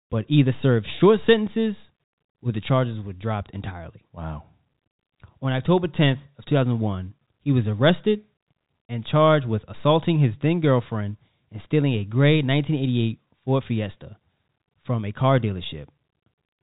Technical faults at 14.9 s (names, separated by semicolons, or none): none